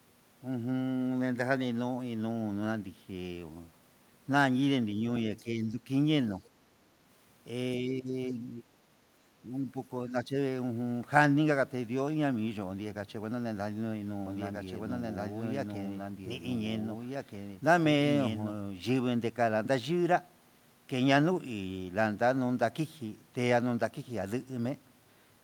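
At 5.37 to 5.43 s, a brief scrap of the other side's voice leaking through is audible, very faint, around 30 dB below the talker. It is likely residual loudspeaker echo that the echo canceller failed to subtract from the microphone. It differs from the dips that follow because it adds a second voice rather than taking anything away from the main one.

Straight after it, from 5.43 to 5.8 s, the talker's speech is suppressed in double talk. The same happens at 7.8 to 8.16 s, 8.32 to 8.75 s, 9.42 to 9.76 s and 10.07 to 10.36 s. Each time the voice sinks, typically by around 10 dB, and only by about 5 dB in the 9.42 s event. The likely cause is the echo canceller losing track during simultaneous talk and attenuating everything. These are partial dips tied to moments of overlap, not clean cuts to silence like packet dropouts.

From 14.26 to 18.54 s there is a doubled audio track. A second full-band copy runs about one and a half seconds behind at roughly the original's loudness, likely from the signal being captured twice through a slower path. 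It is set apart from room echo or reverb by the absence of any decay or room colouring, by its constant lag, and by the abrupt way it switches on and off.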